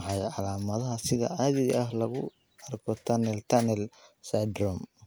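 No technical faults are audible anywhere in the speech recording.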